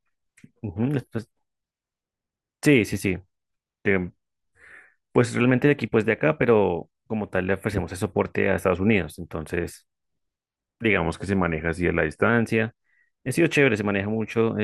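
Speech with two drift correction steps, from 3.63 to 5.44 s and from 10.98 to 12.29 s. Each time playback slows by about 6% and pitch drops by 110 cents, roughly a semitone, then snaps back. The likely cause is clock-matching software abruptly changing the rate to rebalance its buffer.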